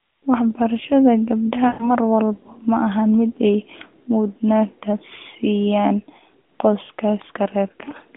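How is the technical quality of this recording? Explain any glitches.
The recording has one glitch, heard through a narrowband mobile channel passing 250 Hz to 3.5 kHz. From 1.68 to 1.90 s there are lost AMR speech frames. About 120 ms was lost, which fits six 20 ms frames. The decoder repeated the last pitch and vocal tract settings with falling gain, so the sound stretches and fades rather than cutting abruptly to silence like a dropout.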